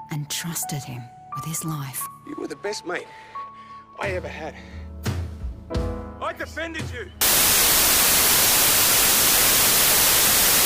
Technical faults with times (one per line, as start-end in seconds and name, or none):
7.21-10.65 wrong sample width